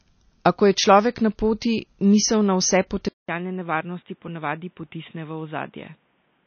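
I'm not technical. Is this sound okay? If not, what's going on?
No. From the start the speech sounds plainly watery and dull, with nothing above about 6.5 kHz, so s sounds lose their crispness. That is likely MP3 compression squeezed too hard, which throws away treble and fine detail to save space.

At 3.09 s the sound drops out for about 0.2 s, then returns noticeably quieter and more muffled, with nothing above about 3.8 kHz and a faint new background noise. The recording likely switched its input to a poorer device, such as a headset microphone.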